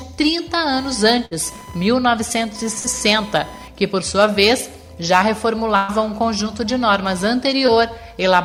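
Computer activity noise runs through the whole clip: a faint buzzing chirp pulsing at roughly 1 kHz, sitting around 25 dB below the main sound. It comes from processor or peripheral load currents disturbing the audio circuit's shared ground, so it follows the machine, not the programme.

Bursts of packet loss occur at 1.25–1.33 s and 2.79–2.86 s. In each, the receiver extended the last sound for 54 ms, fading it into a held buzz or hiss, then resumed with 60 ms of audio skipped. A longer burst at 5.76–5.90 s carries 120 ms of concealment and drops 120 ms.

Short concealed packet loss appears at 7.66–7.70 s. Audio arrived too late for the decoder, which bridged the hole with 15 ms of continued sound before blending back. About 20 ms is missing, heard as a brief smear or wobble in the flow.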